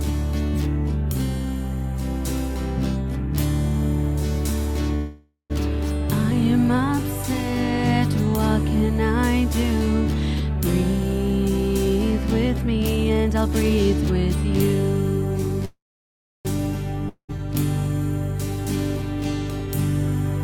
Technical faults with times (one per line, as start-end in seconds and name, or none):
4.95-5.52 call audio freeze
12.96-14.45 jitter buffer speed-up
15.65-16.47 call audio freeze
17.09-17.39 long network dropout